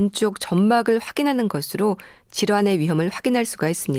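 Nothing stood out on listening to this speech, and the Opus voice coding, at a rate that fits about 24 kbps, leaves only light traces of compression.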